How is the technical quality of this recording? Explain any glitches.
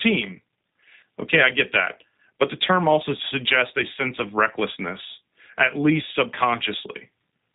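The recording is narrowband, coded speech with one brief dropout.

G.729 codec throughout: the speech is rebuilt at 8 kbit/s from a vocal tract filter, pitch predictor and sparse pulses, so nothing above 4 kHz survives and the damage is plainly audible as a rough, slightly synthetic edge. Unlike plain telephone band-limiting, the voice itself sounds modelled rather than merely muffled.

VoIP packet loss concealed by the speech codec, from 1.0 to 1.04 s: about 20 ms went missing, which fits a single lost packet. The decoder extrapolated from its last pitch and filter state, so the gap is filled with a short stretched sound, a buzzy tone or coloured noise that fades, instead of silence or a click, and the voice stays weak or distorted for tens of milliseconds after it.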